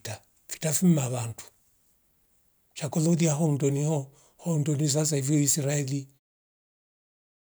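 No technical faults can be heard in this speech.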